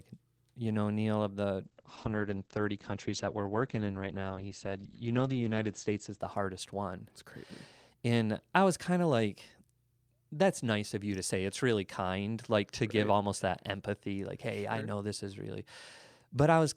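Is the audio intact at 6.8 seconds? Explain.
No. At 6.8 seconds the speech sits inside a call bitrate drop that runs from 1.63 to 7.91 s. The connection's bandwidth estimate fell, so the encoder was pushed from 64 kbps down to 11 kbps. It held that floor for nearly 4 seconds. With so few bits, the coding turns coarse and the top end is cut from 20 kHz to 8 kHz. The voice sounds muffled and rough until quality returns.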